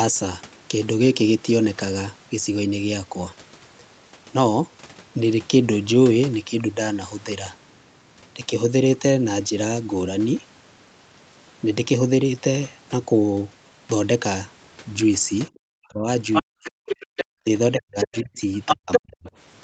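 From 15.61 to 16.07 s, the speech drops sharply, by roughly 40 dB. This is speech suppressed in double talk, likely because the echo canceller muted both talkers at once. From 16.32 to 17.25 s, the other side's voice leaks through, a little quieter than the talker. The echo canceller likely failed to remove it fully. The speech dips again from 16.41 to 16.77 s. From 17.06 to 17.44 s, the background is gated by the echo canceller. The room sound drops out for a moment, by about 40 dB. More double-talk suppression cuts the speech from 17.44 to 18.39 s and from 18.74 to 19.30 s. Overlapping these, from 17.99 to 19.00 s, the other side's voice leaks through at the talker's own level.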